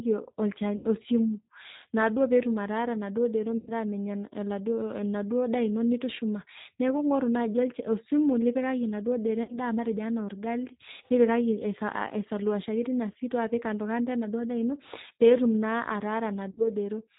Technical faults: G.729 codec; VoIP packet loss concealed by the speech codec

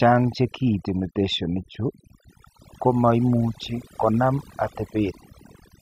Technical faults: overdone noise removal

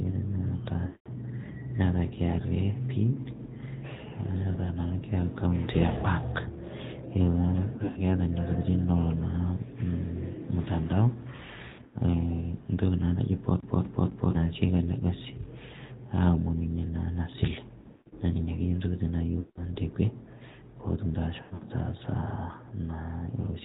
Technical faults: AMR narrowband mobile codec; lost AMR speech frames; CD stuck on one turn

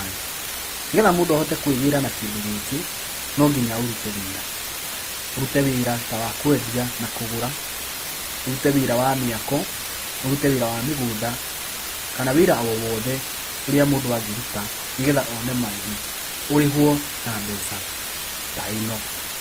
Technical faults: low bit depth with dither; transcoding between lossy codecs

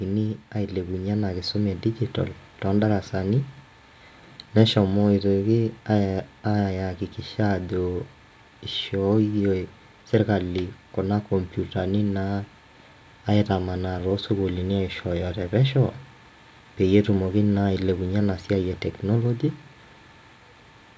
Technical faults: automatic gain rising

